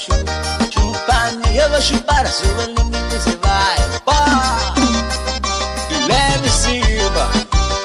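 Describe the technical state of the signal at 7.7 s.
At 7.7 s the signal sits inside a drift correction step that runs from 5.99 s to the end. Clock-matching software likely cut the playback rate by 5.7% in one jump, so speed and pitch drop together, leaving the sound detuned about a semitone flat (102 cents).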